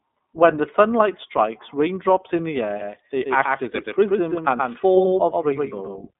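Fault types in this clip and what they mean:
iLBC codec: a narrowband VoIP coder that handles each frame's excitation on its own, here with 30 ms frames, which fits a 13.33 kbit/s mode. The speech sounds clear but rough and slightly synthetic, with plainly audible coding damage. On a spectrogram the energy sits in a telephone band of roughly 200 Hz to 3.6 kHz and nothing shows above 3.8 kHz. The waveform looks smooth but coarse in fine detail.
Doubled audio track: from 2.81 s to the end, a second copy of the same sound plays about 150 ms behind the first and roughly 5 dB quieter. It is likely caused by a slower capture path or an edit that leaves two copies out of step. The copy has no decay or room colour and begins abruptly. A spectrogram shows every feature repeated slightly later and fainter, and the waveform shows overlapping, offset envelopes.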